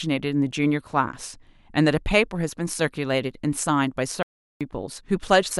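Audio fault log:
4.23–4.61 s: audio dropout to silence. About 380 ms of speech is lost to digital silence with no room tone, likely from the input briefly disconnecting or muting.
5.47–5.52 s: damaged data in a compressed stream. A short glitch where corrupted frames are misdecoded and the decoder resynchronises at the next valid frame header.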